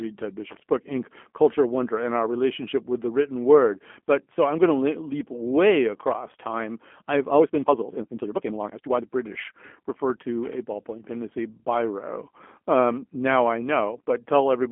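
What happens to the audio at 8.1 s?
At 8.1 s the speech sits inside a time-stretched section running from 7.27 to 9.09 s, played about 1.75 times faster with its pitch unchanged. This is likely the result of software dropping short slices of audio to shorten it, which is why this stretch sounds rushed. Throughout this moment, as across the whole clip, the G.729 codec is plainly audible. It rebuilds the speech at 8 kbit/s from a filter model and pulse patterns, leaving a rough, synthetic texture, and the band is confined to roughly a telephone line with nothing above 3.5 kHz.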